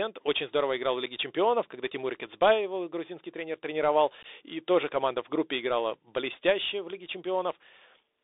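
From start to finish the speech sounds boxed-in and gritty, with a grainy hiss beneath it, scratchy s sounds and roughness on louder syllables. This is the Bluetooth CVSD headset codec: a 64 kbps one-bit delta stream limited to roughly 300 Hz to 3.7 kHz, whose adaptive step cannot keep pace with fast changes.

At 1.06 s there is a brief abrupt-edged gap, and from 4.23 to 4.26 s a longer dropout followed by a moment of softer level. This is unconcealed Bluetooth headset packet loss. About 7.5 ms and then 15 ms of audio went missing, which fits one packet and then roughly two, replaced by silence or an idle pattern rather than patched over.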